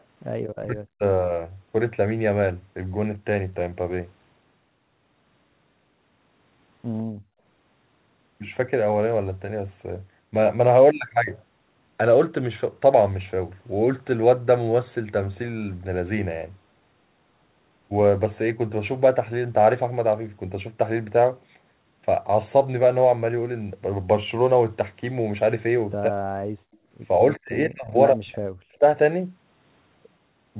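From 0.55 to 1.03 s the talker's voice sinks sharply, by about 40 dB at its deepest. This is speech suppressed in double talk, likely because the echo canceller, hearing both sides at once, turned everything down.

At 7.03 to 7.43 s the room sound drops away by about 40 dB and then returns. This is background gated by the echo canceller, which clamped the microphone hard while the loudspeaker played and released it afterwards.

A brief double-talk dip hits the voice again at 26.08 to 26.2 s. The background gating follows at 26.48 to 26.82 s. Inside that gated stretch, from 26.73 to 26.78 s, a faint delayed copy of the voice slips through, trailing by 155 ms and sitting around 40 dB below the speech. This is an echo leak, likely loudspeaker pickup that the loudspeaker side's canceller failed to remove and sent back.

The voice is pushed down twice more, at 27.42 to 27.94 s and 28.12 to 28.85 s, both times by about 40 dB. 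These are further cases of speech suppressed in double talk, likely with the same mechanism at work. The G.711 A-law path still limits everything to 4 kHz.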